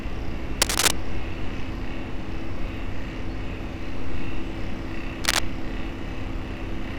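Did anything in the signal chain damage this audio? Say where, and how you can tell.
Yes, in the analogue wiring. There's cable scratch noise twice: a burst of scratchy, rustling crackle from 0.62 to 0.91 s and a shorter one from 5.24 to 5.39 s, each sitting a few dB above the sound itself. The uneven, dense texture is the giveaway. The likely cause is a worn cable, connector or pot being moved, so its contact resistance flickers rapidly and dumps that ragged noise straight into the signal.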